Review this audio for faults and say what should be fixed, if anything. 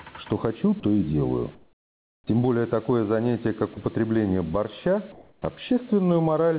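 Throughout the clip the background swells in the pauses and sinks under each loud sound, with the level moving by about 10 dB. This is gain pumping, likely from input gain set too high so that a fast limiter keeps clamping down on every peak. Lowering the microphone gain so the limiter rarely engages would prevent it.

At 0.80 to 0.83 s and again at 3.74 to 3.77 s, about 30 ms of sound gives way to flat noise before returning. This is sound dropped by the voice detector, likely because the sender's detector mistook quiet material for background and briefly stopped transmitting while the receiver substituted filler. A longer detector hangover or a lower detection threshold would prevent it.

From 1.55 to 2.27 s the real background turns into a smooth, featureless hiss about 14 dB quieter. From 5.12 to 5.42 s there is a similar swap, only about 1 dB lower. This is comfort noise in place of the background, likely from discontinuous transmission, where the receiver synthesises a rough stand-in while the sender is silent. 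Disabling discontinuous transmission, or improving the comfort-noise level match, would prevent it.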